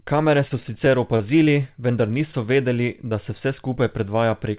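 Speech over a call link, and it sounds narrowband, with nothing above 4 kHz, which fits G.711 A-law at 64 kbps. From 0.48 to 1.49 s there's repeated packet loss (robotic sound): seven small gaps, the longest about 28 ms, each patched by stretching the previous sound, so it goes choppy. Then at 3.09 to 3.13 s, just before "da se", a short concealed packet loss leaves a brief smear where the receiver filled a lost chunk by continuing the last sound.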